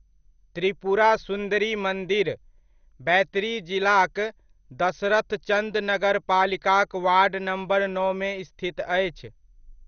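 From start to finish the speech sounds dull and gurgly, with nothing above about 6.5 kHz and a grainy, watery texture on top. That's likely MP2 compression starved of bits, which fits a rate around 48 kbps. Layer II splits the sound into 32 sub-bands and shares out bits between them. Here the top bands get switched off entirely, bands flicker on and off, and the ones left are coarsely quantised.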